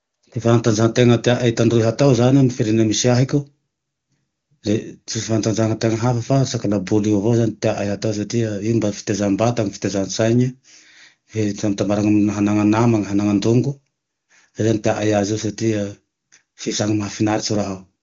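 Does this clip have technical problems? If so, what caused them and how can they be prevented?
No, nothing in this speech clip stood out as a technical problem on listening, so there is nothing here that needs preventing.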